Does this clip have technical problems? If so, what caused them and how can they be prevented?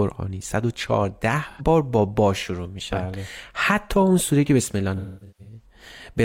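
Yes, there is AAC frame loss with concealment. At 1.50 to 1.62 s, about 85 ms of audio, consistent with two lost frames, is rebuilt from the last good spectrum, giving a brief smeared, noisy patch that shows as blurred, flattened harmonics on a spectrogram. From 4.96 to 5.66 s, losses scattered over roughly half a second, the longest around 300 ms, make the sound decay toward silence and fade back, seen as a sagging waveform envelope. Adding forward error correction or retransmission would prevent it.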